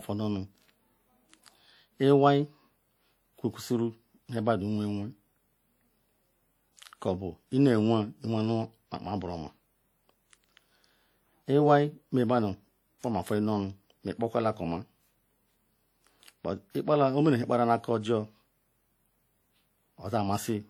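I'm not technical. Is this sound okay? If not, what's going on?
No. Throughout the speech there's a swishy, ringing quality, with a hiss that swells and fades along with the talking. That points to WMA compression, likely from the file being squeezed down with Windows Media Audio. Unlike a plain muffled recording, the high end isn't cut away; the damage is a watery smearing around each sound, and unlike steady background hiss, this noise comes and goes with the speech itself.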